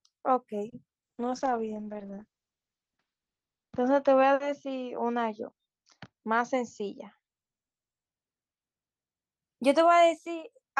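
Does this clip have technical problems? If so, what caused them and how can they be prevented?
Yes, there are four separate problems here, all typical of a call over a struggling network.

First, a short stall from a late packet at 0.69 to 0.74 s. A packet didn't show up on time, the jitter buffer ran dry, and the receiver stretched the last bit of speech for about 30 ms until it arrived. Nothing is actually lost, but that sound hangs a touch too long, and the playout delay grows by 30 ms from then on. A slightly deeper or adaptive jitter buffer on the receiving side would have absorbed that late arrival without stalling.

Right after, at 0.98 to 1.04 s, there's a short concealed packet loss. About 40 ms of audio never made it to the decoder, so the receiver invented a filler by carrying on the previous sound, pitched if voiced and as shaped noise if not, then crossfaded back in. You hear a quick smear or wobble there, and 40 ms of real speech is simply gone. 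Turning on in-band FEC or a bit of redundancy would let the receiver rebuild a lost packet like this instead of guessing.

The biggest one is a call bitrate drop lasting from 1.02 s to 8.13 s. The bandwidth estimate collapsed, so the encoder was pushed from 64 kbps down to 8 kbps, and the audio bandwidth shrank from 20 kHz to 8 kHz along with it. The speech goes muffled and somewhat rough and watery, worst during the roughly 2.1 s spent at the bottom rate, before it climbs back. Fixing this means a more stable link and a congestion controller that backs off less sharply, or a higher floor on the encoder's minimum bitrate.

Finally, a jitter buffer speed-up runs from 6.34 to 6.89 s. The buffer had built up more audio than it wanted, so the receiver trimmed tiny pitch-period-sized chunks over and over, around 40 ms in total, to pull the delay back down. The speech plays about 6% fast at the same pitch, so it sounds a little hurried. 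Gentler time-scale adjustment spread over a longer stretch, or less delay build-up in the first place, would make this much less noticeable.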